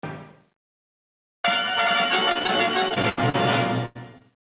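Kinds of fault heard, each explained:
Gain pumping: The level swings by about 25 dB throughout. Loud and soft passages end up close in level, so the whole clip sounds squashed and breathing. The likely cause is input gain set far too high, with a fast limiter or compressor clamping down on each peak and letting go between them.
Repeated packet loss (robotic sound): Two stretches break up, from 2.32 to 2.50 s and from 2.88 to 3.36 s. Audio keeps dropping out and each hole is patched by stretching the last sound. The first stretch has four short holes, none over 30 ms. The second has six, the longest 80 ms, and about 180 ms of real audio is missing. The sound turns choppy, with pieces gone.
Burst of packet loss: At 3.86 to 3.97 s about 100 ms of audio never arrives in time to be played. The receiver fills the hole by carrying the last sound forward and fading it down, so it becomes a held, dimming buzz or hiss. 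The audio then picks up again further on, and the part in between is simply lost. It is a single break, unlike the repeated stretches before it.
Short concealed packet loss: Near 4.2 s, from 4.18 to 4.22 s, roughly 20 ms of audio goes missing. The receiver bridges it by extending the preceding sound briefly, then blends back into the real signal. It comes across as a quick smear or wobble rather than a clear gap. Any very short sound falling inside it can vanish. The narrow band, with nothing above 4 kHz, fits a G.711 call path.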